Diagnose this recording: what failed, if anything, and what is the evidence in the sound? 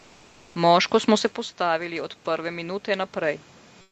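In the call processing stage, automatic gain rising: the input level fell by about 13 dB when the talker moved back around 1 s, and the gain control pushed its gain up by about 4 dB between 1.08 and 3.46 s. Speech and room noise swell together gradually across that stretch.

At the codec, comfort noise in place of the background, likely from Opus discontinuous transmission: from 3.81 s to the end at 3.91 s, about 107 ms of real room background is replaced by steady, featureless synthetic noise, roughly 8 dB quieter than the background it stands in for.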